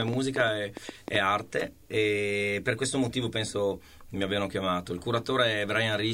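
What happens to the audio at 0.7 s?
At 0.7 s the audio sits inside a train of clicks running from 0.02 to 1.16 s: about ten similar pulses at roughly 8 per second, unevenly spaced, poking out above the sound. Likely from interference or a faulty connection or power supply; their matching shape separates them from random crackle.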